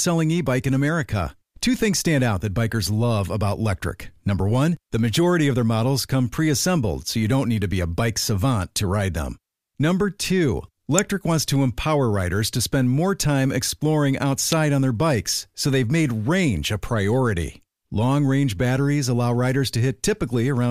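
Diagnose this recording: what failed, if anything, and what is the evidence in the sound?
Two sharp snaps cut across the speech, at 10.99 s and 14.52 s, each over in a few milliseconds and peaking a few dB below full scale. They sit on top of the speech rather than interrupting it. This is an electrical switching spike in the analogue wiring: a nearby switch, motor or static discharge likely arced, and the cabling picked up that brief burst of energy as an impulse.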